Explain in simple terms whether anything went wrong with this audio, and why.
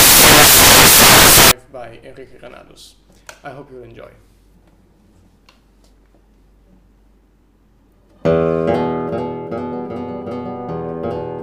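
For the first 1.51 seconds, from the very start to 1.51 s, the audio is replaced by loud, harsh noise. This is the fault known as samples built from the wrong bytes. Each sample is stored as a few bytes, and here they were read back in the wrong order or with a one-byte offset. The tiny, rapidly changing details ended up in the loudest position, which turns the real sound into noise.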